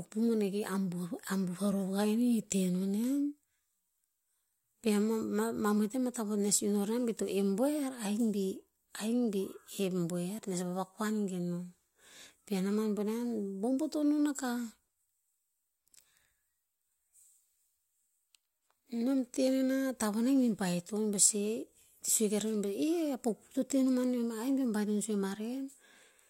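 No faults are audible anywhere in the recording.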